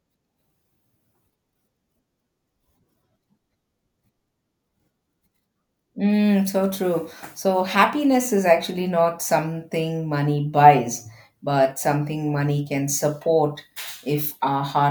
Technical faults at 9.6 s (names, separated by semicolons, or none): none